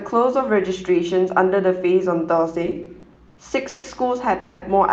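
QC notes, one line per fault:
2.65–3.86 s, repeated stalls (stutter): late packets emptied the jitter buffer seven times. The last sound was stretched across gaps of up to 150 ms, adding 350 ms in all, so the speech drags and stutters.
4.40–4.64 s, call audio freeze: packets were likely held up in transit, and the buffer ran dry. A 220 ms continuation of the last sound fills the pause, then the speech resumes where it stopped.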